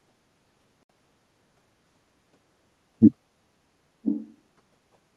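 A speech recording with two separate faults. At 0.83 s the audio drops to silence until 0.91 s, a hole of roughly 70 ms, after which the speech picks up further along as though it had kept playing underneath. This is likely a Bluetooth dropout: packets failed to reach the headphones in time and were discarded. The length of the gap fits about three lost packets, roughly 64 ms of audio. From 4.04 s to 4.33 s a faint, delayed copy of earlier speech surfaces, trailing the original by 1.0 s and sitting about 15 dB below the direct speech. This is an echo leak, likely from a far end playing the call over a loudspeaker whose echo canceller let part of the microphone pickup through and returned it down the line.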